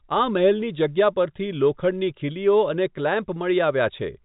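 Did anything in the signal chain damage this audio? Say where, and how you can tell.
No, nothing in the signal chain damaged this audio.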